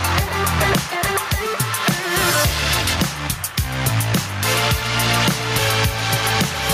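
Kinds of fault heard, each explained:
Gain pumping, throughout: the gain swings about 10 dB, so loud and soft parts sit squashed together. The likely cause is input gain set far too high, with a fast limiter clamping each peak.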